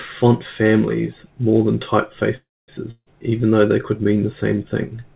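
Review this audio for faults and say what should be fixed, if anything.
A call audio freeze runs from 2.36 to 2.71 s. The last sound is stretched into a fading buzz that drops to about 0.24 s of silence, and then the speech resumes intact but about 0.32 s late. This is likely a jitter buffer running dry while packets were held up in transit. Giving the jitter buffer more adaptive headroom and prioritising the audio stream would prevent it.

A long network dropout follows from 2.91 to 3.08 s. A fading concealment tail and about 60 ms of silence stand in for about 0.16 s of speech that never returns. The likely cause is lost packets rather than delayed ones. Forward error correction or redundant audio encoding on the call path would recover them.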